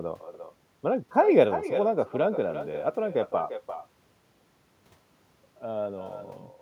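Throughout, the speech returns roughly 400 ms later as a thinner copy about 10 dB down: echo with no canceller, the far-end loudspeaker's output recaptured.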